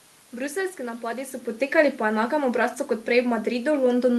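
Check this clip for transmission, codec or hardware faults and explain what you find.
Checking this clip turns up no faults.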